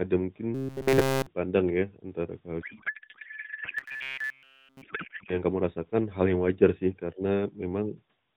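Speech carried over AMR narrowband mobile audio, with nothing above 4 kHz and only light coding buzz, consistent with the 12.2 kbps mode. From 0.55 to 1.26 s, just before "pandang ya antara", and again from 3.78 to 4.82 s, the sound turns into a robotic buzz at 134 Hz, entirely made of repeats, likely from the receiver repeating short buffers of about 7.5 ms. From 2.62 to 5.41 s, between "pandang ya antara" and "kamu rasakan hal yang", a codec payload misread replaces the speech with garbled warble: octet-aligned AMR frames are being decoded as bandwidth-efficient, so the bit fields land in the wrong places.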